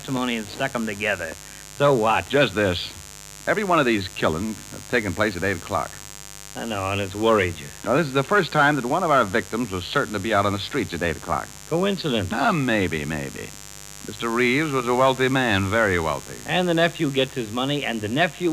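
A steady, raspy mains buzz runs under the audio from start to finish. It sits roughly 20 dB below the signal. Its harmonics stack on a 50 Hz mains supply and reach up into the kilohertz range. Sharp switching spikes from a dimmer, rectifier or unshielded cable are the cause.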